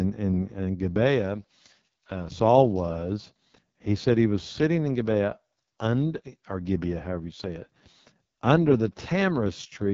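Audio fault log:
Throughout: AMR wideband (HD Voice) codec. The speech comes out rough and raspy with heavy damage, which fits the lowest 6.6 kbit/s mode, where the vocal tract model has too few bits. Nothing sits above about 7.4 kHz, and the top band is just shaped noise.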